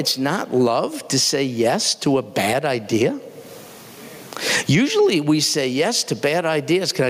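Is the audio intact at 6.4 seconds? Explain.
No. At 6.4 seconds, as through the whole speech clip, there is gain pumping: the gain swings by roughly 25 dB, pulled down on every loud sound, so loud and soft parts end up squashed closer in level. The likely cause is input gain set far too high, with a fast limiter clamping down on each peak.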